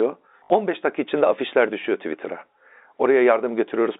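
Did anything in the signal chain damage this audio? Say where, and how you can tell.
Yes, at the network stage. From 0.44 to 0.5 s, just before "dakika içinde afişler düşüyor", there's a brief robotic stutter. That's packet loss with the last packet repeated: about 60 ms went missing, which fits three 20 ms packets, and replaying the same chunk buzzes at roughly 50 Hz through the telephone-band G.711 line.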